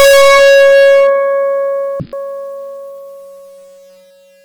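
From the start to 1.09 s, the music is pushed about 34 dB beyond what a stage in the chain can pass, so hard clipping slices every waveform peak flat. With overload that deep, almost the whole signal sits against the ceiling, and the squared-off tops spray harmonics high into the spectrum. The result is a harsh, buzzing fuzz smeared over everything in that first second rather than occasional crackle.

From 2.00 to 2.16 s, a couple of compressed frames arrive with flipped bits and the decoder plays them anyway, a corrupt frame decoded. The misread gains and codes drop energy at frequencies the music doesn't contain, peaking at around -10 dBFS, and the damaged stretch inserts 96 ms of extra time. It comes across as a short, loud burst of chirpy noise that briefly stalls the flow of the music.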